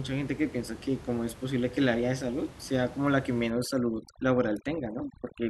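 From 3.5 s to the end, overdone noise removal pulls the room noise down and breaks it into twinkling specks; the spectrogram shows a blotchy, gated background.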